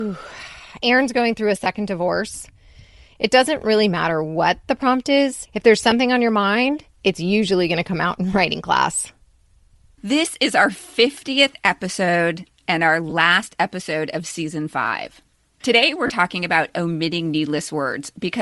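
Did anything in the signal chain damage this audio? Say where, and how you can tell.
Yes. At the codec stage, the speech carries a breathy, grainy edge throughout, with the upper spectrum sounding noise-filled rather than detailed. This is likely Bluetooth LC3 compression at a low rate, which fits about 48 kbps: the encoder zeroes high-frequency content and the decoder substitutes noise.

The wireless link also shows lost LE Audio frames: brief noisy smears at 1.64–1.66 s, 5.91 s, 13.10–13.13 s and 16.07–16.10 s, lasting 20, 10, 20 and 30 ms. Their lengths fit whole 10 ms frames. The decoder filled each gap by repeating the last spectrum with random signs.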